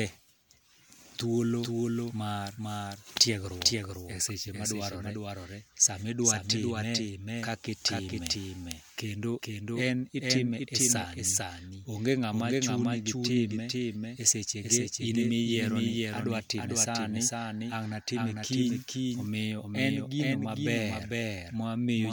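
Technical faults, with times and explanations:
Throughout, doubled audio track: the speech is joined by a second, equally loud full-band copy about half a second behind. It is likely from a second capture path or a misaligned edit. Unlike echo or reverb, there is no decay, no room colouring, and only one repeat.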